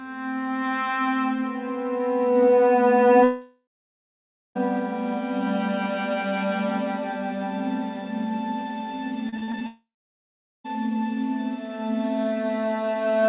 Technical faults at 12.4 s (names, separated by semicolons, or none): none